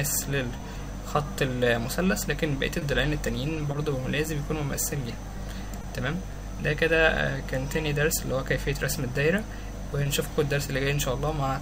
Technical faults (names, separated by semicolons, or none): short concealed packet loss